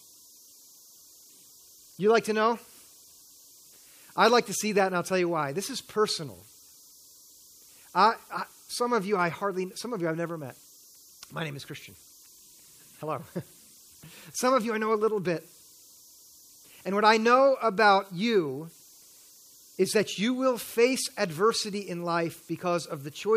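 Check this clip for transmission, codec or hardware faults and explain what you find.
One hardware fault runs through the whole speech clip. A faint whistle around 5 kHz and grainy hiss, about 30 dB below the signal, sit in pauses: converter idle tones from an undithered delta-sigma converter cycling through repeating bit patterns.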